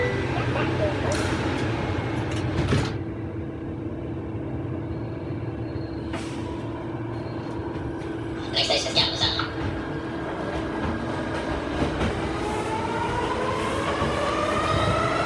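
Throughout the clip runs at the wrong sample rate: everything plays 1.5 times too fast and about 7 semitones high, which fits 16 kHz material played back at 24 kHz without conversion. A spectrogram shows all content shifted upward and compressed in time.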